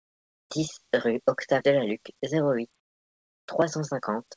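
From 0.00 to 0.50 s, and again from 2.80 to 3.48 s after "zéro huit", comfort noise replaces the background. The pauses drop by about 25 dB into a steady, featureless hiss, likely from discontinuous transmission. Nothing sounds above 8 kHz on this call path.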